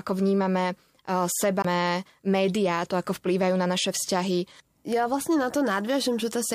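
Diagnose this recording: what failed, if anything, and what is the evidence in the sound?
A CD skip at the playback stage: from 1.62 to 1.65 s there is a tick and a brief mute of around 20 ms, then the speech resumes at "médiá to ako vplývajú" from a displaced point, as the laser jumped tracks. Unlike a network dropout, the continuity break reflects a jump along the disc's spiral.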